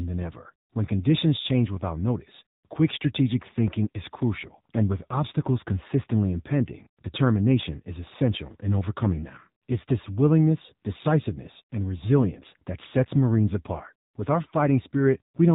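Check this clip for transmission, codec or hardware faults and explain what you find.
One fault runs through the whole clip: AMR narrowband mobile codec coding of the speech. The band stops sharply at 4 kHz, so sibilants and upper harmonics are missing and the voice sounds boxed-in. Each 20 ms frame rebuilds the voice from a vocal-tract filter excited by only a few pulses, and at this low rate, which points to roughly 7.4 kbps, the result is plainly audible buzziness and a synthetic edge.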